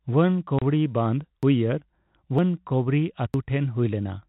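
At 0.47 s the speech jumps forward without any pause, dropping roughly 40 ms. The same seamless skip recurs at 1.43, 2.39 and 3.34 s, about a second apart. That steady spacing points to audio missing between chunks, most likely a recorder working in one-second blocks and losing a sliver at each handover. Because the two sides butt straight together, it sounds like a stutter in the flow rather than a gap.

In contrast, from 0.59 to 0.62 s there is an actual hole: 30 ms of dead silence with abrupt edges, heard as a brief chop. This is packet loss filled with silence, which fits a single lost 30 ms packet replaced by nothing. It differs from the chunk skips in that time is not removed here. The audio stops and restarts in place, and its isolated position breaks the one-second rhythm. Underneath both faults sits the narrow, telephone-band tone of G.711 coding, with its quantisation hiss barely audible.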